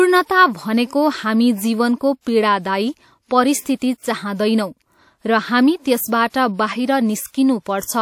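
Speech clip with pre-echo at 2.21, 3.61 and 6.29 s: hiss of about 50 ms precedes sharp attacks, seen as a smear before each onset, from block-spread codec noise.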